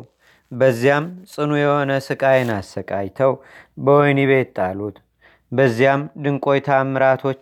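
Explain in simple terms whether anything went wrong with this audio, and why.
Nothing went wrong with this speech recording; no technical problems can be heard anywhere in it.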